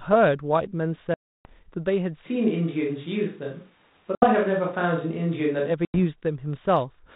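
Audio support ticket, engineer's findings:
Packet loss on the ADPCM call, three hard-edged dropouts to silence: 1.14 to 1.46 s (310 ms, something like thirty packets' worth), 4.15 to 4.26 s (70 ms), 5.85 to 5.99 s (90 ms). Decoder predictor and step size lose sync with the sender, so audio returns slightly distorted and settles over a few tens of ms.

Switch to a distant microphone, 2.27 to 5.69 s. Sound abruptly goes roomy and hollow, thinner low end, room noise roughly 35 dB under the speech, no real level drop. Likely the close mic dropped out and a farther one took over; change back is equally sudden.

G.726 link at 32 kbit/s is working normally: nothing above 4 kHz, only light codec hiss.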